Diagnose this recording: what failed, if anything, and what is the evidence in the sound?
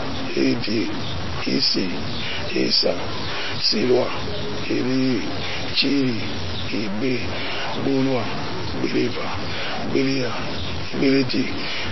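Running through the whole clip, the speech carries a grainy distortion that rises and falls with it, with noise only about 5 dB below the signal. That's likely low bit depth without dither at a sample-format conversion: truncating to something like 4 bits leaves an error that tracks the waveform.

Layered on top, the speech sounds watery and swirly throughout, and nothing comes through above 5.8 kHz. That points to MP3 compression, likely at a bitrate in the low twenties of kbps, where the encoder drops weak frequency lines frame to frame and cuts the treble.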